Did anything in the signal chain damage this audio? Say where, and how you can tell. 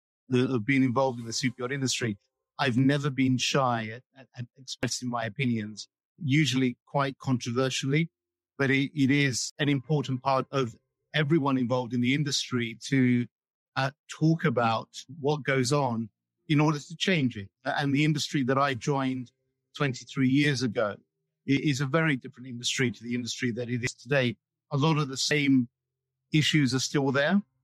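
Yes. Small forward jumps at 4.83, 9.50, 19.76, 21.57, 23.87 and 25.31 s point to the driver or buffer stage, likely a dropped buffer (overrun). Each time the hardware overwrote audio before it was read, losing roughly 20 to 70 ms and splicing the edges together without any gap.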